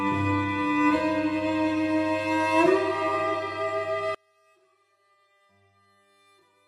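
From 4.15 s to the end, the sound drops by about 38 dB and is left as a faint remnant. The likely cause is one channel inverted: with one stereo side flipped in polarity, everything shared between the channels cancels when they are summed to mono.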